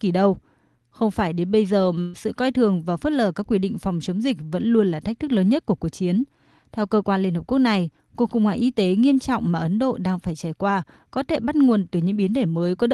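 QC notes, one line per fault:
2.01–2.15 s, burst of packet loss: after "phải đến bây giờ" the sound stalls into a held, fading continuation for 120 ms. The receiver concealed the lost packets by stretching the last audio. Speech resumes at "sự coi thường và" with 120 ms skipped.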